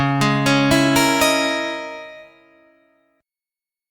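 Nothing stood out on listening to the clip.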